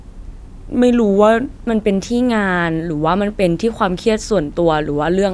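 A speech recording with a wrong sample rate fault from the start to 1.63 s. Speed and pitch drop together, running at 0.92 times normal speed and about 1.5 semitones low, so the voice sounds slightly low and slow. That fits audio recorded at 24 kHz but played back at 22 kHz without conversion.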